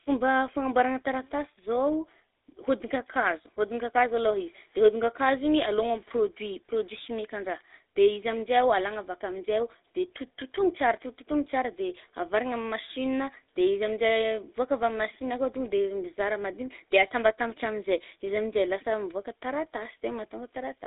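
From start to finish the speech carries the GSM full-rate codec's signature. The voice is squeezed into a roughly 300 Hz to 3.7 kHz line band, and its buzzy, gravelly roughness is plainly audible. A regular-pulse excitation keeping only every third sample produces this, which fits a 13 kbps stream.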